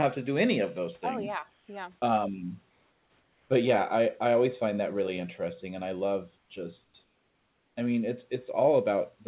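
In the pauses at 1.54 to 1.68 s, 2.7 to 3.5 s (just before "but yeah i i"), 6.38 to 6.5 s (just after "interesting and i love"), 6.84 to 6.94 s and 7.04 to 7.76 s (before "i mean it's"), the real room background gives way to comfort noise, likely because the sender paused transmission during silence. A steady, featureless hiss stands in for it, about 3 to 5 dB quieter, and about 11 dB quieter at 6.84 s. Unlike a gate or dropout, the pauses never fall to true silence.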